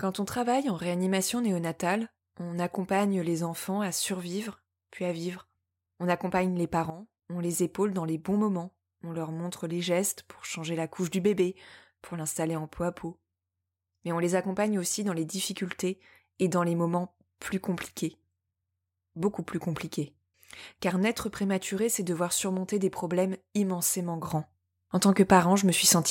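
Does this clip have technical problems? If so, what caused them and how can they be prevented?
Yes. Sudden gain jumps: sound and background noise drop about 12 dB from 6.9 to 7.23 s, then rise about 7 dB from 24.3 s to the end, likely from gain steps applied without a ramp. The waveform envelope steps abruptly, and the spectrogram shows sharp vertical brightness edges. Ramping every gain change over a few milliseconds prevents this.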